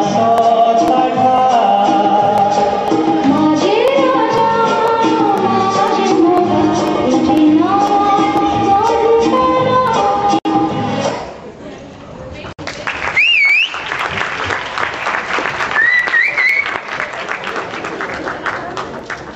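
At 10.39 s and again at 12.53 s, the sound drops out for about 63 ms and 60 ms: a gap at a join of encoded pieces, where encoder start-up delay and end padding were left in. Each is a brief hole with slightly smeared edges, a blank vertical stripe on a spectrogram, before the sound resumes where it stopped.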